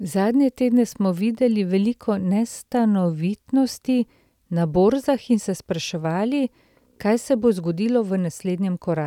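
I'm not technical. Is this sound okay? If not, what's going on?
Yes, this one sounds fine, with nothing going wrong anywhere in the recording that you'd need to worry about.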